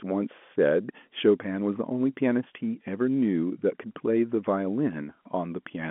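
Nothing in this speech goes wrong at any point; what you hear is just the ordinary telephone-line sound of G.711 A-law coding, with the band held to roughly 200 Hz to 3.4 kHz and nothing above about 3.8 kHz.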